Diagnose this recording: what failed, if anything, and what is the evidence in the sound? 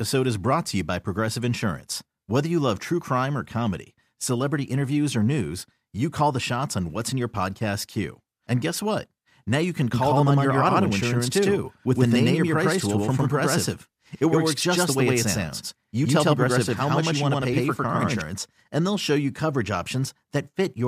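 The speech picks up a doubled audio track from 9.94 s to 18.22 s: a second, equally loud copy trailing by roughly a tenth of a second, dry and full-band, switching in and out abruptly. Likely a second, slower capture or routing path summed into the mix.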